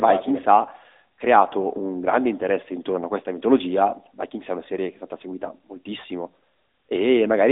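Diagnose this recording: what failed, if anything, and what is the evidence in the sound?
The codec stage is the problem: the whole clip has gone through the AMR narrowband mobile codec. There's nothing above about 3.7 kHz and little below 150 Hz, so the speech has that boxed-in phone-line sound. The coding damage is plainly audible, a buzzy, synthetic edge on the voice, because the codec rebuilds speech from a vocal-tract model and a sparse pulse excitation, frame by frame. The amount of artefact fits a mid-range mode of around 10 kbps.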